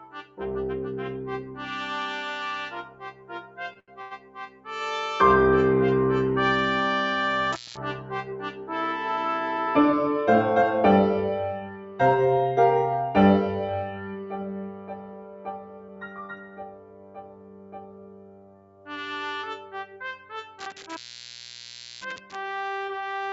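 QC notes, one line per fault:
Throughout, noise suppressor applied to music or sounds: the level pumps and held material thins while attacks stay intact, with a loss swing of around 10 dB. A speech-tuned suppressor stayed active and keeps treating steady tones, ambience and reverb tails as noise.
0.0–0.4 s, 1.44–1.59 s, 2.84–4.67 s, 8.31–8.70 s, 11.60–12.00 s, 13.85–18.89 s and 19.57–20.01 s, sound cut by the noise suppressor: sustained or decaying sound sinks by up to about 10 dB (about 5 dB at 1.44 s, about 8 dB at 8.31 s and 19.57 s), cutting tails short because the suppressor judged them to be noise.
3.73–3.77 s, 3.79–3.90 s and 4.02–4.13 s, short stall from a late packet: sound hangs for 20, 82 and 93 ms, then resumes with nothing lost. Packets arrived late, the jitter buffer ran dry, and the receiver stretched the last audio while it waited.
7.53–7.77 s and 20.59–22.36 s, intermittent contact: crackle marks a dropout of about 0.2 s and later one of about 1.05 s, with faint hiss while the sound is gone. 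A loose plug or cable is briefly breaking the signal path.
9.10–10.63 s, jitter buffer speed-up: the audio runs about 8% fast at unchanged pitch, hurrying the pace as roughly 150 ms in total is removed. The buffer held more audio than it aims for, so the receiver trimmed short pitch-period pieces repeatedly to reduce delay.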